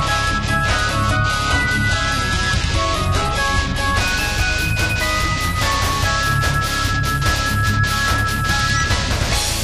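From the start to 4.0 s the audio plays through an adaptive stream starting at a low bitrate. The player opened on a lean version to begin quickly. Nothing is present above 11.8 kHz, and the upper range has the hollow, synthetic sheen of a low-rate encoding, which fits HE-AAC at around 16 kbit/s. At 4.0 s the quality jumps up suddenly, consistent with AAC-LC near 96 kbit/s. There is no dropout or silence at the switch, which sets it apart from a rebuffering stall.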